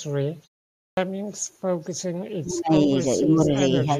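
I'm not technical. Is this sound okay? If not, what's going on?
No. Three separate problems can be heard.

Echo leak: at 0.44–0.62 s, 1.83–1.92 s, 3.0–3.08 s and 3.64–3.85 s a faint, delayed copy of the voice comes back about half a second late, barely audible at first and clearer near the end. It is likely a speakerphone whose echo cancelling let some sound slip through.

Clipped start after a pause: at 0.88 s, after about half a second of silence, the sound begins abruptly with its first 92 ms missing, as if the playback equipment was slow to wake up.

Speech suppressed in double talk: from 2.37 to 2.9 s the voice sinks sharply in pieces, then dips slightly at 3.19–3.51 s and 3.84–3.89 s. Unlike the clipped start, this happens mid-speech, likely because both sides talked at once and the echo cancelling turned everything down.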